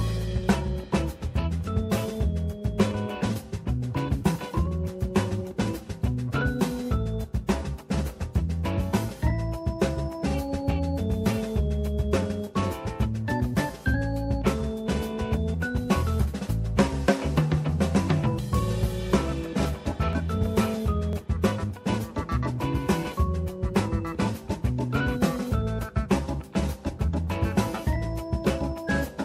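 From 19.13 to 23.12 s, periodic USB or driver dropouts skip roughly a millisecond of audio once per second, heard as regular ticks.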